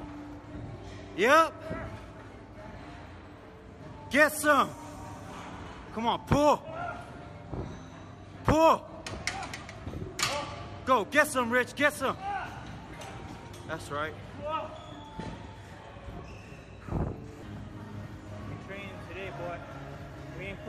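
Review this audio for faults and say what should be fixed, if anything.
Nothing stood out on listening, so there is nothing here that needs fixing.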